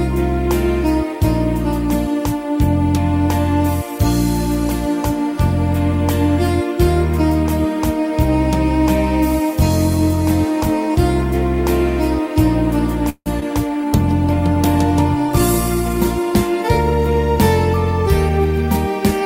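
At 13.09 s the stream of packets most likely stalled on its way to the receiver, leaving the jitter buffer with nothing to play: a call audio freeze lasting until 13.28 s. The receiver carried the last sound forward as a fading buzz or hiss for about 165 ms in all, ending in roughly 50 ms of silence. When the packets arrived, playback picked up exactly where it had stopped, so nothing is lost, but a pause has been inserted and the call now runs about 165 ms later.

Just after, from 13.40 s to 13.44 s, comes a short concealed packet loss. About 40 ms of audio failed to reach the decoder in time. The receiver covered only about 17 ms of it by extending the preceding sound before blending back into real audio, so the rest is simply dropped and the delay shrinks by around 20 ms. It comes across as a brief smear, the sound jumping a little where material is missing.

From 13.81 s to 16.48 s the bandwidth estimate collapsed and the encoder was told to spend far fewer bits: a call bitrate drop from 64 kbps to 25 kbps, held at the lowest rate for about 2.6 s. 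With so few bits the coding becomes coarse, so this stretch sounds rougher and watery until the rate climbs back.

Between 18.29 s and 18.78 s the jitter buffer had built up more audio than it targets, and the receiver trimmed the excess with a jitter buffer speed-up. It cut out many short slices, each one or a few pitch periods long, about a tenth of a second in total. Playback runs at roughly 116% speed while the pitch stays unchanged, so this half-second sounds noticeably hurried.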